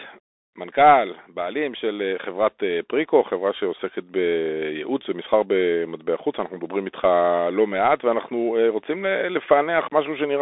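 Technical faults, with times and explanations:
Throughout: Bluetooth CVSD headset codec. Nothing above 3.8 kHz survives, and the band sits roughly between 300 Hz and 3.6 kHz. The one-bit up-or-down coding, which fits a 64 kbps CVSD link, leaves a granular hiss and scratchy s sounds. That grain, not mere band-limiting, separates it from a plain telephone filter.
1.54 to 3.89 s: automatic gain rising. Level climbs by about 6 dB over more than two seconds as the gain control decides the input is too quiet. Voice and background noise swell together, which distinguishes it from someone simply speaking louder or moving closer.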